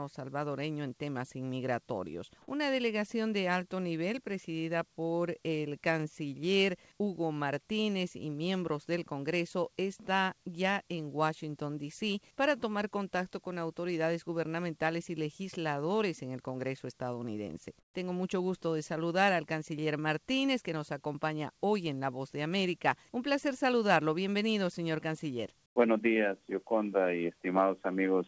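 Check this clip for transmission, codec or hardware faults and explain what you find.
Two brief spots of comfort noise in place of the background, at 17.80 to 17.94 s and 25.66 to 25.76 s. Discontinuous transmission likely paused the sender, and the receiver substituted steady synthetic noise, dropping the background about 16 dB and about 7 dB. Nothing is heard above 8 kHz, which fits a wideband call codec.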